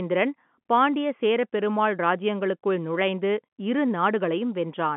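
There are no technical faults to describe in this telephone-band speech.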